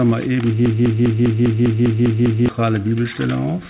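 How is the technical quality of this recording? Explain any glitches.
There's one real glitch, a broken-record loop, heard over a call line with nothing above about 4 kHz. From 0.66 to 2.49 s a 0.2 s chunk repeats nine times, likely a stalled stream resending its last fragment, so that stretch's real audio is lost.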